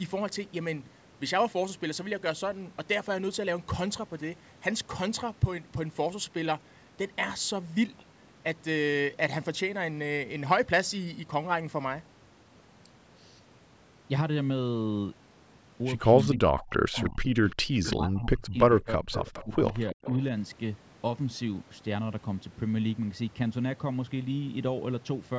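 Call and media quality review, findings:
Speech suppressed in double talk, 16.26–19.57 s: near-end speech dips and drops out in pieces, around 2 s affected in total, deepest cut roughly 40 dB. A brief second cut at 19.92–19.97 s, roughly 30 dB deep. Likely the echo canceller's suppressor: with both ends talking it cannot tell local speech from loudspeaker echo, so it attenuates everything, taking the wanted talker down with the echo.

Echo leak at 16.59–17.10 s (about 20 dB below the speech), 17.49–17.96 s and 19.15–20.23 s (each about 15 dB below). The echo is a faint delayed copy of the far-end voice, trailing it by 336 ms. Likely residual echo at the loudspeaker end: that canceller failed to fully remove the acoustic pickup, so part of it was sent back down the line.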